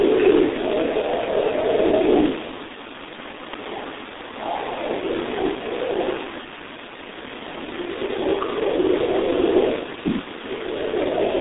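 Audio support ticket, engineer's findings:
G.723.1 codec throughout: muffled, hoarse speech, smeared consonants. Spectrogram empty above 3.8 kHz, thin below 200 Hz. Coarse 30 ms framing, consistent with roughly 6.3 kbit/s. Heavy damage.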